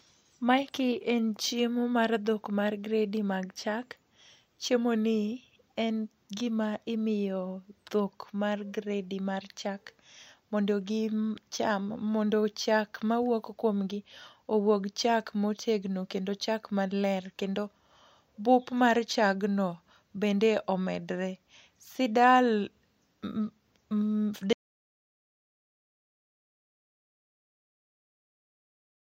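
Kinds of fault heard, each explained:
Audio dropout to silence: from 24.53 s the speech cuts off mid-flow and the remaining 4.7 s to the end is silence with no room tone, likely because the input was lost while the recorder kept writing silence.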